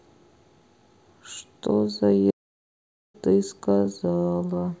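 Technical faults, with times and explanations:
2.30 to 3.15 s, playback stall: the speech cuts out mid-flow and the output sits in dead silence for about 834 ms, then picks up again. The gap is too long and too clean to be a dropout or a glitch; it's the player going quiet and then recovering. The likely cause is the player running dry of buffered data, or its audio thread getting blocked, so nothing was fed to the output until it caught up.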